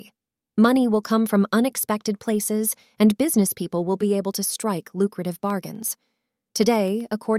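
From 5.13 s to 7.26 s the speech carries periodic USB or driver dropouts: every 0.125 s the driver briefly stalls and a fraction of a millisecond of audio is replaced by silence. About twenty evenly spaced ticks result, heard over the speech.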